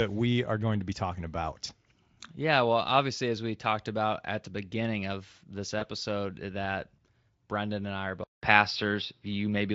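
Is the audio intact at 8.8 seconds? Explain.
No, from 8.24 s, right after "and I are", there's a 0.19 s gap, then sound turns dull, nothing above 5.6 kHz, and the level shifts. Likely an input switched to a poorer device.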